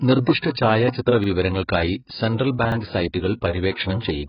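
The speech runs through what is likely heavy AAC compression, AAC-LC at a very low rate that fits roughly 12 kbps. Nothing survives above about 5.1 kHz, so the sound is dull and muffled, and sustained vowels and sibilants carry a warbling, fizzy texture where the coder has left gaps in the spectrum or filled bands with substitute noise. A plain low-pass filter would give the same missing top end but none of that swirling, unstable quality, which is what points to a codec rather than a filter. There are two repeated-buffer stutters, at 1.24 to 1.28 s and at 2.72 to 2.76 s. Each time, a 40 ms piece of audio plays twice in a row with a hard join, because fresh audio did not arrive in time and the last buffer was played again. No audio is skipped, so this differs from a dropout, which leaves a silence or a jump forward, and from a lone click, since the repeated piece is long enough to register as a stutter. 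Finally, at 3.72 to 3.76 s, a short hiss leads into a sharp attack: pre-echo. The coding noise belonging to that loud onset spreads backwards across the 40 ms before it, into a quiet gap, and the attack itself sounds softened. It differs from a plain noise burst in that the hiss sits only ahead of the attack and is tied to it.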